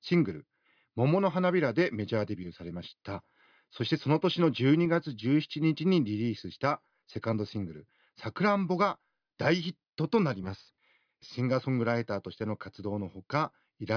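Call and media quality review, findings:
No defects observed on the speech path; nothing to attribute to capture, transport or playback components.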